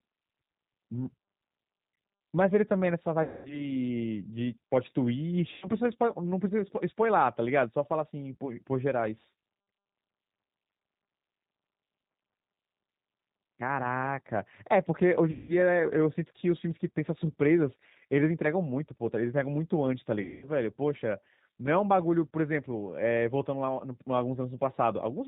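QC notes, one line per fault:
throughout: G.729 codec. The speech is band-limited, with nothing above 4 kHz. It sounds rough and slightly synthetic throughout. The damage is plainly audible. The coder does not send the waveform. It sends a vocal tract filter, a pitch predictor and a few pulses per frame. The decoder rebuilds speech from those. That is why it has a rough, artificial texture. The sound points to the 8 kbit/s G.729A variant.
3.23–3.69 s, 5.54–5.69 s, 15.31–15.56 s, 20.22–20.47 s: VoIP packet loss concealed by the speech codec. About 220, 80, 180 and 200 ms of audio are lost. In each gap the speech smears into a buzzy tone or coloured noise that fades. The decoder repeats its last pitch and filter. It lowers the gain frame by frame. Each frame builds on the previous one. So the speech stays weak and distorted briefly after audio returns. The gap lengths fit 20 ms packets.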